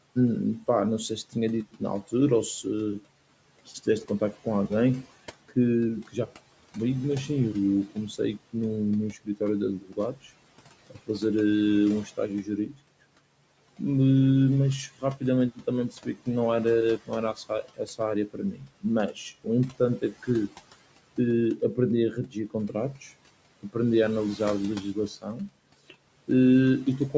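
The noise suppressor cuts speech at 0.6–2.65, 3.66–6.34, 7.28–12.8, 14.88–20.54 and 21.57–27.14 s. It mistakes softer syllables for background and pulls them down by about 14 to 18 dB, from a fraction of a second to over a second per stretch. Endings sound swallowed. The waveform shows sudden envelope dips, and the spectrogram shows faded, gappy consonant energy.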